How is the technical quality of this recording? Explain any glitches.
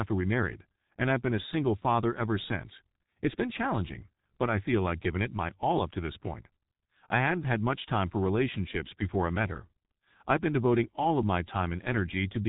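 Technical quality is poor throughout the speech. From start to finish it sounds muffled and hoarse, with smeared consonants and nothing above about 3.8 kHz. That is heavy G.723.1 codec damage: long 30 ms frames and a slowly updated voice model, pointing to a bitrate near 6.3 kbit/s, blur fast articulation and discard the upper band.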